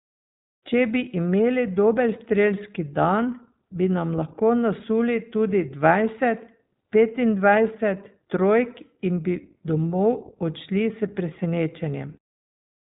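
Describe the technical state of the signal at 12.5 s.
At 12.5 s the speech still carries iLBC codec coloration, as it does for the whole clip. The codec codes each 20 ms frame's excitation independently of the previous frame, which fits its 15.2 kbps mode. Nothing passes above about 3.8 kHz, so sibilants and consonant detail are dulled to a narrowband telephone quality. The damage is plainly audible as a slightly rough, synthetic grain on the voice.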